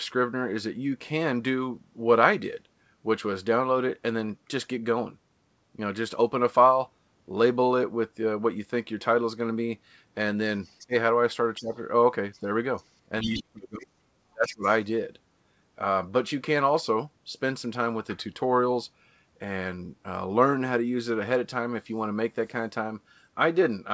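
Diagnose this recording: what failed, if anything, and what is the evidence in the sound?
Faint scraps of a second voice sit under the speech at 10.63–10.87, 12.33–12.40, 12.77–12.83 and 13.22–13.39 s, mostly well below the talker and loudest in the last burst. This is the other side's voice leaking through, likely residual loudspeaker echo that the call-processing echo canceller failed to remove.

The talker's speech dips or drops out at 10.86–10.93, 11.58–11.76, 13.22–13.97 and 14.33–14.66 s. The losses range from a moderate dip to near silence, worst around 13.2–14.0 s. This is speech suppressed in double talk: the echo canceller likely mistook overlapping speech for echo and attenuated both.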